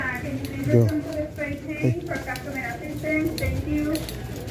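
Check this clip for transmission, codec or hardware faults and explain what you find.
Nothing faulty turns up anywhere in this recording.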